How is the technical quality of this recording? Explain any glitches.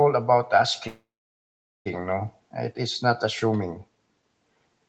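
The recording has one clear glitch, a call audio freeze, heard over a band that stops at about 8 kHz, as expected from an Opus call at around 24 kbps.

From 0.87 s to 1.88 s the sound hangs for about one second. Incoming packets were likely held up so the jitter buffer ran dry, and the receiver stretched the last sound into a short fading tail, then held roughly 0.8 s of silence. Unlike a dropout, nothing is lost: the audio picks up exactly where it stopped, just a second later.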